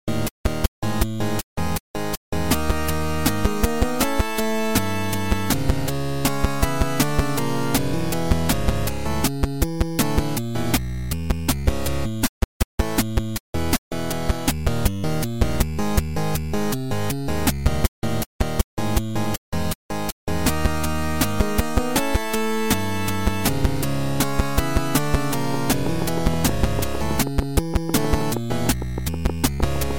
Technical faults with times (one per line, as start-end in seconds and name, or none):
25.54-29.92 train of clicks